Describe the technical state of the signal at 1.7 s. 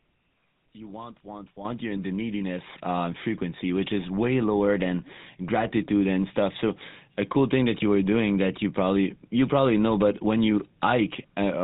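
The call software judged the microphone too quiet and raised the input volume in a single step of about 10 dB at 1.65 s, between "you want want" and "you're in the". So just before 1.7 s, the speech and the background noise behind it jump up together, with no fade. The step lands mid-phrase, and the louder level holds from there on.

Throughout, including at 1.7 s, the signal is carried by the GSM full-rate codec, with plainly audible damage consistent with its 13 kbps rate. The codec models the voice as a filter driven by a sparse, regularly spaced pulse excitation and discards everything above 4 kHz. The speech therefore sounds band-limited and muffled, with a buzzy, gravelly roughness on voiced sounds.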